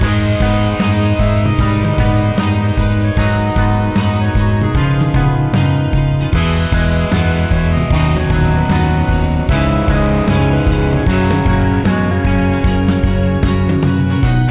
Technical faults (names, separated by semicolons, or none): none